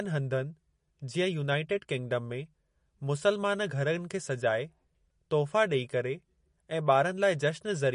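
A speech recording with MP3 compression damage running through its whole length. Nothing is present above 10.6 kHz, and the coding artefacts are plainly audible. That points to a starved bitrate, likely around 40 kbps, forcing the encoder to cut the treble and drop weak spectral detail.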